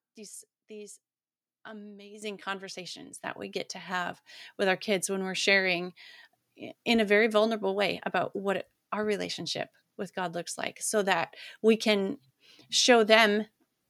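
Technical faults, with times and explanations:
2.22 s and 3.24 s, microphone volume stepped up: the speech and background jump together, by about 9 dB, then about 6 dB just before "we get to have", as software raised the input gain.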